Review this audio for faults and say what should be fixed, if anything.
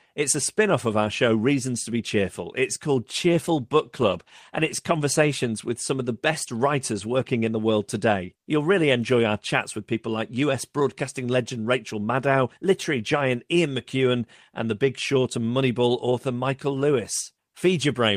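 From 3.19 to 5.77 s, just before "some of the best", the speech turns rougher and watery, with the top end dulled, before clearing again. This is a call bitrate drop: the connection's bandwidth estimate fell, so the encoder cut its rate from 32 to 18 kbps, holding the low point for about 1.76 s. The coarser coding and trimmed high frequencies cause the degradation. Reserving more headroom in the bandwidth estimate or smoothing rate changes would prevent it.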